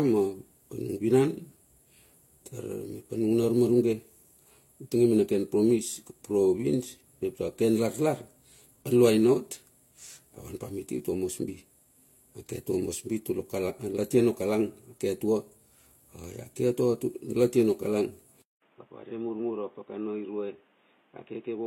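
Transcoding between lossy codecs runs throughout: the speech was likely encoded twice, consistent with Vorbis near 44 kbit/s then HE-AAC near 32 kbit/s. Stacked artefacts remain, with nothing above 16.2 kHz.

An input switched to a poorer device at 18.42 s: after a 0.2 s silence, speech turns boxy, likely from another microphone, cut above 3.8 kHz, about 10 dB quieter, with faint new background noise.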